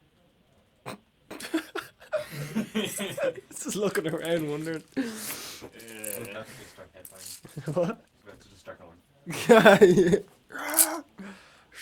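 From 5.78 to 10.69 s the sound turns coarse and rough, worst over 2.85 s: a call bitrate drop, fitting an encoder squeezed toward 16 kbps.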